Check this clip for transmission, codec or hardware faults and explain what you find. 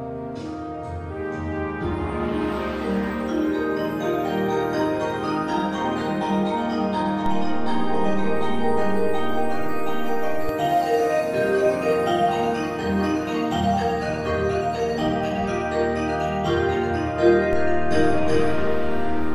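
Two DC steps occur. At 7.26 s the zero line jumps by about -19 dBFS and returns at 10.49 s. At 17.53 s it jumps again and holds to the end. Each shift is a sudden offset, as from converter recalibration or an offset input being switched in, and is heard as a low thump or click.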